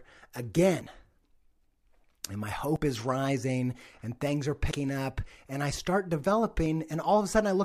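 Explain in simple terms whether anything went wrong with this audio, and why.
Audio missing between chunks at 2.76 and 4.71 s: the speech skips briefly, likely because the recorder loses a split second while switching between its roughly two-second chunks.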